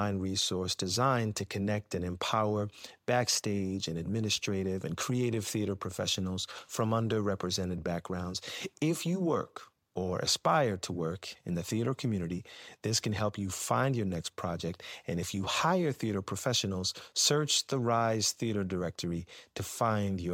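Nothing in the speech stood out as a technical problem on listening.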